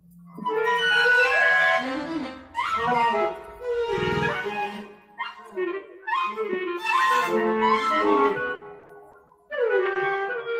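From 8.45 to 9.97 s, repeated packet loss (robotic sound) sets in: audio data keeps arriving late or not at all, and each hole is bridged by stretching the last received sound forward. Six gaps fall within this stretch, the longest 60 ms, adding up to about 200 ms, around 13% of the span. The result is choppy playback with clipped fragments, since each patch has barely settled before the next dropout hits.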